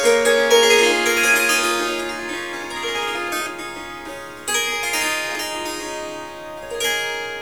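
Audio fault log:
No faults heard anywhere in the recording of sounds; nothing to log.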